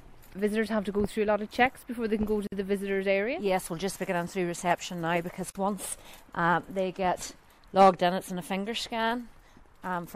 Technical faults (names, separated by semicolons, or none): gap at a join of encoded pieces